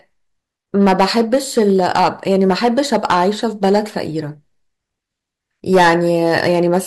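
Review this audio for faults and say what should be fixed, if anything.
Loud syllables throughout the speech break into a harsh, crackling fuzz. This is hard clipping: the signal runs about 10 dB past what the stage can pass, so its peaks are sliced flat. Roughly 2% of samples hit the ceiling, and the flattened tops spray high harmonics. Set gain with enough headroom that speech peaks stay below full scale.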